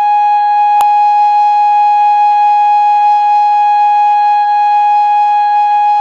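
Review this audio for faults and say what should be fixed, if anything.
A file header played as audio shows up at 0.81 s as a single sharp, loud snap in the music. A separate WAV piece was joined on without stripping its header, so those few dozen bytes of metadata are played back as samples. What separates it from an ordinary edit click or a buffer dropout is that it sits exactly at a piece boundary and is loud no matter what the music is doing there. Strip or skip the header of each WAV piece before concatenating or streaming the audio data.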